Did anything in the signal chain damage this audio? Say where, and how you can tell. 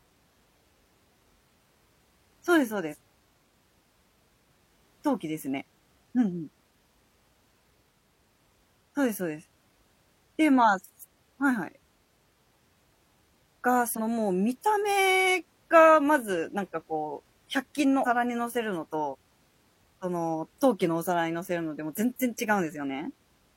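Yes, at the codec stage: compressed frames are skipped four times, at 2.88–2.95, 13.94–13.99, 18.02–18.07 and 19.09–19.15 s. Each time the speech jumps forward by roughly a tenth of a second, about 150 ms at 18.02 s, which fits two or three 46.4 ms frames going unplayed. The speech picks up again without a silent gap, which separates it from a buffer dropout.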